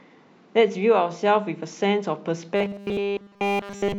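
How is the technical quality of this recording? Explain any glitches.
The recording breaks down near the end. From 2.56 s onward there's robotic sound from repeated short buffers: a rigid 200 Hz metallic buzz, likely a 5 ms chunk looping over and over because fresh audio stopped arriving.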